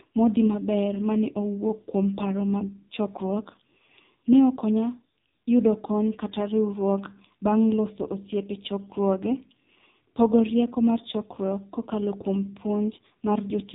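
Throughout, the speech passes through the AMR narrowband mobile codec, which rebuilds the voice from a vocal-tract model and sparse pulses. Its heavy damage fits a low mode of about 5.9 kbps: nothing above 3.8 kHz, and a buzzy, synthetic voice.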